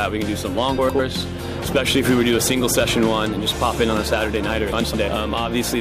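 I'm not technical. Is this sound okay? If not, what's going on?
No. Frames out of order at 0.78 to 1.00 s and 4.72 to 4.94 s: two neighbouring chunks of about 105 ms each play swapped, causing a garbled flutter.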